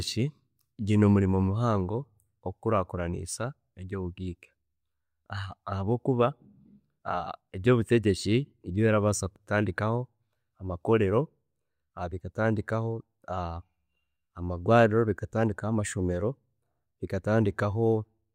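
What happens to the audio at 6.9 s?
Nothing goes wrong at 6.9 s: the speech there plays through intact, with no dropout, click, glitch or other audible fault.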